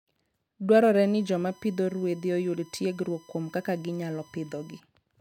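A speech recording carrying USB whine from 1.03 to 4.80 s: a steady 1 kHz tone, roughly 30 dB below the speech, from current drawn in 1 ms bus frames leaking through power or ground. A spectrogram shows a flat horizontal line at 1 kHz across that span.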